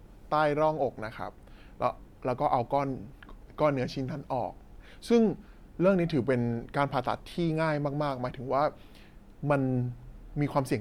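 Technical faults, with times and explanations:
No technical faults can be heard in this speech clip.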